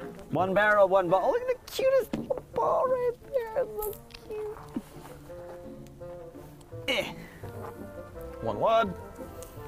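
No technical faults can be heard anywhere in the recording, and the signal stays steady and intact throughout.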